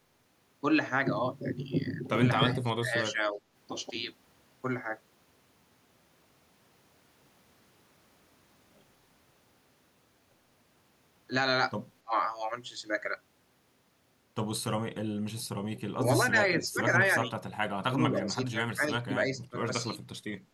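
Speech, with its level repeatedly pulled down and two faint echoes. Between 2.43 and 3.39 s, 12.03 and 12.15 s, 15.3 and 17.03 s, and 17.88 and 20.03 s the voice dips in short pieces, falling by about 10 dB, 25 dB, 20 dB and 15 dB at its deepest, the longest stretch losing under a second in total. This is likely speech suppressed in double talk: an echo canceller, unable to separate this talker from loudspeaker echo while both sides spoke, turned everything down. Unlike an echo fault, nothing is added; the voice itself is removed. At 2.66–2.71 s and 18.16–18.22 s a brief, very quiet copy of the voice arrives about 0.3 s late, far below the main speech. This is likely an echo leak, where residual loudspeaker pickup at the far end was sent back. It is set apart from the suppression by the extra delayed sound rather than any loss of level.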